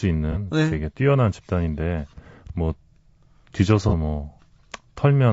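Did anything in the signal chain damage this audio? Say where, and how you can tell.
Yes. Throughout the clip the speech sounds rough and grainy, with noise filling the gaps between harmonics and a thin, somewhat synthetic top band. That points at the codec stage, likely low-delay AAC compression (AAC-ELD) running at about 32 kbps, whose short frames resolve pitch poorly.

Two brief smeared, noisy patches at 0.32 to 0.37 s and 3.89 to 3.94 s show AAC frame loss with concealment in the network or decoding path. Each patch fits one missing frame that the decoder rebuilt from the previous spectrum.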